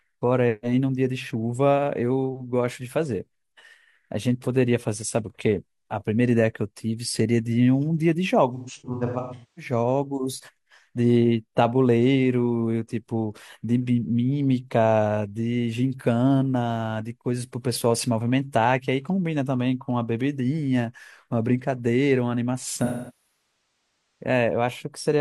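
From 8.54 to 9.72 s the speech turns smeared, noisy and phasey in patches, about 725 ms of lost audio scattered over roughly a second, with the longest gap around a fifth of a second. From 22.77 to 24.23 s a longer loss of about 1.24 s decays towards silence and fades back in. Both are AAC frame loss with concealment: the decoder rebuilds missing frames from the last good spectrum, then fades out as the loss persists.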